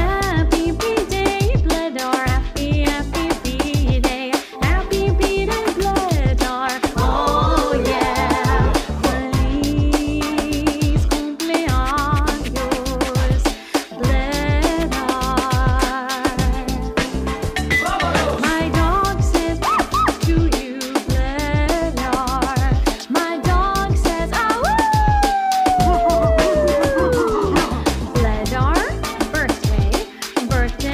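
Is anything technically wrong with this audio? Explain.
No, nothing stood out as technically wrong on listening.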